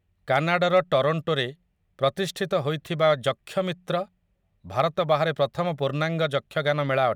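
Early on, from about 0.34 to 0.78 s, the speech runs into hard clipping: it's pushing roughly 2 dB past what some stage in the chain can pass, so the loudest peaks get sliced flat. Those squared-off tops throw harmonics way up the spectrum, which you hear as a gritty crackle on the peaks. There's another brief hit of the same overload, again about 2 dB, at 4.8 s, right before "ବାହାରେ ପ୍ରଥମ".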